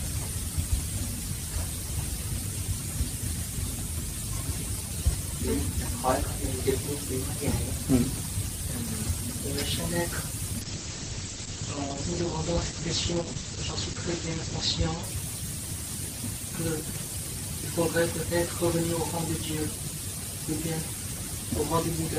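From 10.61 s to 15.09 s there is a call bitrate drop. The encoder was starved of bits. Coding turns coarse, and the top end is cut from 20 kHz to 8 kHz. The sound goes muffled and rough for about 4 s. This fits a fall from roughly 40 to 11 kbps.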